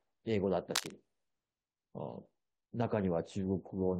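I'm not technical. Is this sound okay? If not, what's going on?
No. From 0.75 to 0.92 s there is cable scratch noise, a brief scratchy rustle about as loud as the speech. It is most likely a worn cable or plug being moved. Unlike a single click, it is a dense, uneven burst lasting a moment.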